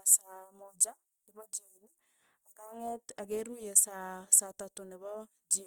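Throughout, the speech has that grainy, rough texture of Opus compression, likely at a low rate near 24 kbps, where bands get noise-filled, though bandwidth stays full to about 20.2 kHz.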